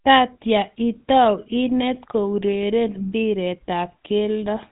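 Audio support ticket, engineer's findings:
GSM full-rate codec artefacts, entire speech clip: buzzy, gravelly roughness. Spectrogram shows hard cutoff at 4 kHz and coarse, pulse-regular excitation. Consistent with 13 kbps GSM full rate.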